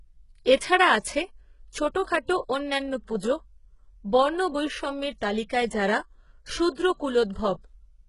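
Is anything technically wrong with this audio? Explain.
Yes, there are two faults. Throughout, the speech has nothing above about 11.1 kHz and a gritty, synthetic treble with lispy s sounds, likely from heavy HE-AAC compression at a bitrate near 12 kbps. The top band is copied up from lower bands, so it does not match the real sound.

Pre-echo occurs at 0.45 s, 2.27 s and from 6.75 to 6.77 s. Codec noise spreads ahead of sharp attacks by 11, 17 and 25 ms, producing brief hiss and softened onsets.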